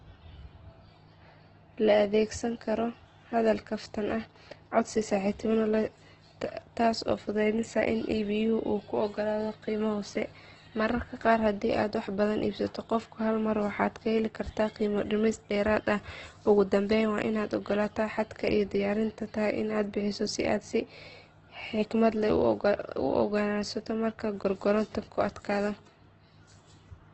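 Across the whole clip, the speech carries heavy codec damage, likely from Opus compression. The encoder stays in its music mode and keeps each band's energy. When bits run short, it fills bands with folded copies or noise. So tones sound rough, grainy and noisy rather than swirly. The band is cut to wideband, with nothing above 8.1 kHz. The roughness points to a very low bitrate, around 12 kbps.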